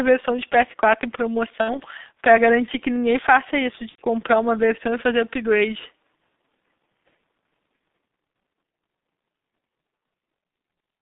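The whole recording carries the sound of the G.723.1 codec: the speech sits in a narrow band from about 150 Hz up to 3.7 kHz, and the heavy coding damage leaves it muffled and hoarse, with smeared consonants. That hoarseness sets it apart from simple telephone band-limiting, which narrows the sound but keeps it clean. The slow, frame-by-frame updating of the voice model, with a roughness that fits a rate near 6 kbit/s, points to this early internet-telephony codec.

At 1.61 s and again at 3.89 s comes VoIP packet loss concealed by the speech codec. The first gap runs to 1.81 s, with about 60 ms of audio missing, which fits two 30 ms frames. The second ends at 3.99 s, with about 90 ms missing. In each, the decoder keeps repeating its last pitch and filter at falling gain, so the speech stretches into a brief fading sound rather than simply cutting out; in the second gap, three frames long, it is muted from the third lost frame. 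An abrupt click would instead point to a plain dropout.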